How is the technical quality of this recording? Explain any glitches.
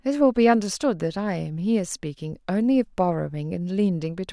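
No technical faults can be heard anywhere in the recording, so there are no glitches to explain.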